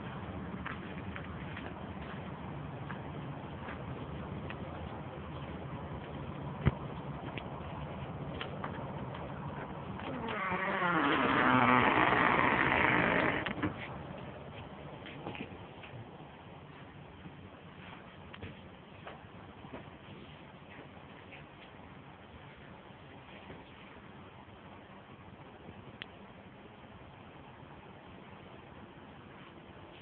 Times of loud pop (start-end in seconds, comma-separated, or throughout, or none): none